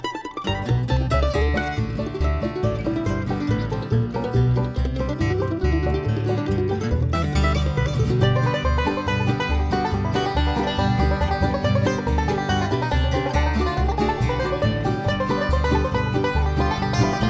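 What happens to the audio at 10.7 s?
Nothing goes wrong at 10.7 s; the audio plays through that moment intact, with no dropout, click or other fault.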